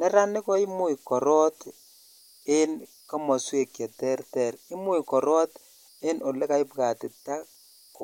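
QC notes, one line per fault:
Throughout: converter idle tones. A faint whistle near 5 kHz sits in the pauses between phrases, with grainy noise beneath the quieter speech, at about 33 dB below the signal. An undithered delta-sigma converter fed a very small input locks into repeating bit patterns, and those cycles emerge as tones. On a spectrogram this shows as thin horizontal lines around 5 kHz that stand out clearly in gaps; the waveform looks slightly fuzzy at low levels.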